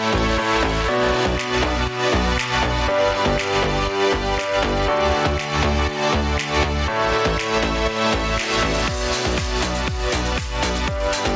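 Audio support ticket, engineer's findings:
Gain pumping, throughout. Input gain likely set far too high for the mic, with a fast limiter or compressor clamping down on each loud sound. Gain swings roughly 10 dB. Dynamics squashed. Call path rolls off above 8 kHz, which fits G.722 at 64 kbps.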